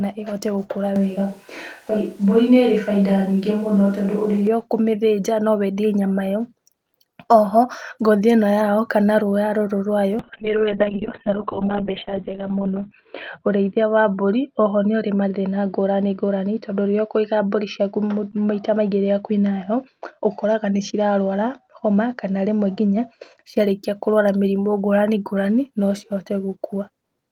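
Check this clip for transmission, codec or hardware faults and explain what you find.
Two faults stand out in this speech clip, one in the capture chain and one in the call's transmission.

Switch to a distant microphone, from 0.96 s to 4.47 s, just after "ĩhote gũkũra" and until "ũkũmĩthĩnja no". The sound abruptly turns roomy and hollow, with thinner low end and audible room noise sitting roughly 35 dB below the speech, though the overall level barely changes. This is likely a pickup further from the talker standing in for the close microphone. The close sound returns just as suddenly.

Call bitrate drop, from 10.2 s to 23.49 s, ending just before "ciarĩkia kũrwara mĩrimũ". The connection's bandwidth estimate fell, so the encoder was forced to spend far fewer bits. The sound points to a fall from around 32 kbps to about 6 kbps. At that rate, detail is coded coarsely and the top end is cut from about 20 kHz down to 4 kHz. 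The speech turns muffled and rough, and is worst for about 2.7 s at the lowest point before it recovers.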